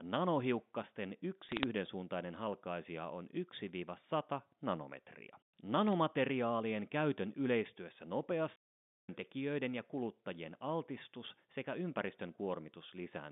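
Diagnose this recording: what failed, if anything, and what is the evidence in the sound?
Two short bursts of sharp ticks sit on the line, one from 1.49 to 1.64 s and a lighter one from 5.88 to 5.93 s. That's bit errors on a digital phone line, so a network or transmission fault. On a G.711 mu-law path each flipped bit corrupts a single 8-bit sample. When it hits the sign or a high-order bit you get a click, and a handful close together gives brief crackle over speech that is otherwise unchanged. The error rate is a small fraction of a percent, heavier in the first burst.

Then at 8.56 s the audio just stops dead for about 0.53 s and comes back at 9.09 s. There's no noise or fade in the gap, only silence in mid-flow. That's a playback stall at the playback or buffer stage: the output went quiet until the player recovered. The likely cause is the player's buffer running dry or its audio thread getting blocked for about half a second. 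The narrow telephone band around it, roughly 150 Hz to 3.6 kHz, is just the G.711 coding.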